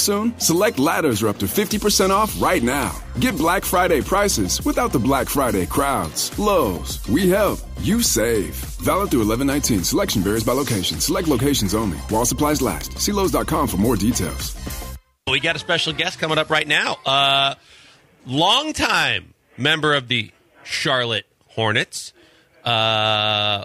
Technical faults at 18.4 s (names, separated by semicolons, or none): none